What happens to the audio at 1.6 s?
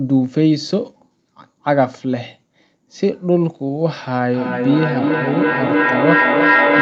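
Nothing goes wrong at 1.6 s: the speech continues intact through that moment, with only the normal band limit of the call path, nothing above about 8 kHz.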